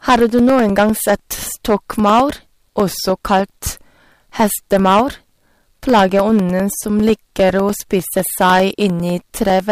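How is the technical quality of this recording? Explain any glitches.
Poor: the speech is distorted throughout and carries a steady train of ticks.

Hard clipping runs through the whole recording. The speech was driven about 10 dB past what the signal chain could pass, so a few percent of samples are sliced flat at the ceiling. The waveform shows squared-off peaks, and the spectrogram shows harmonic smear reaching high up on loud syllables. It sounds like a harsh fuzz on louder passages.

Periodic USB or driver dropouts occur every 0.1 s from 0.09 s to 9.60 s, around a hundred in all. Each time, something likely stalled the driver or bus, and roughly 2 ms of audio was replaced by silence. The waveform shows evenly spaced notches, and the spectrogram shows thin vertical lines. They are heard as regular ticking under the speech.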